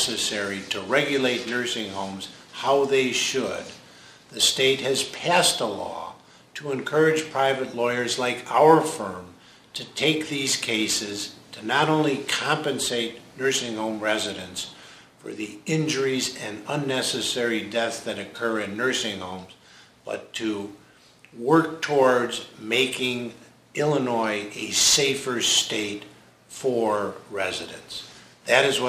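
Throughout the audio, crude rate conversion adds a gritty, inharmonic fizz that tracks loud and high-pitched passages. Samples were simply dropped or repeated, which fits a 48 kHz to 44.1 kHz change, leaving error roughly 20 dB below the signal. A spectrogram shows stray, unrelated lines and haze mirroring the real content.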